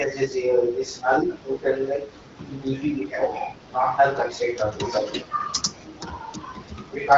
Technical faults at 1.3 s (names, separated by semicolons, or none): none